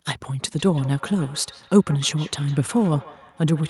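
Speech, and from 0.59 s onward there's feedback echo between two devices: a second device replays it, roughly every 150 ms, peaking about 20 dB below the speech.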